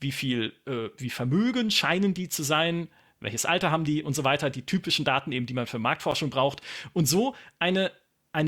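A speech clip with a gap between stream segments at 6.11 s, right after "eben die man für". A hard-edged silence of about 9 ms cuts in. Two segment timestamps, consistent with 2-second segments, leave a hole that the player fills with silence. No audio is lost.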